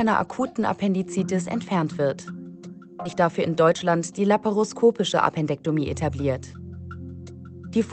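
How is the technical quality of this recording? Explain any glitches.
The recording has three timing glitches, all from a call path with its usual codec coloring and high frequencies cut off above about 8 kHz.

At 3.05 to 3.07 s there is a skip ahead. About a second of sound was dropped. Playback jumps forward with no gap.

From 3.61 to 3.83 s and from 5.01 to 6.11 s there is a jitter buffer speed-up. The buffer held more audio than it aims for. It trimmed short pitch-period slices, roughly 40 ms and then about a tenth of a second. The sound runs 14% and 10% fast at unchanged pitch, so it feels hurried.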